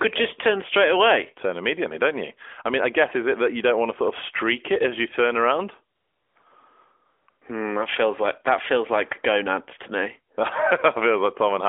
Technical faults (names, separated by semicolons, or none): AMR comfort noise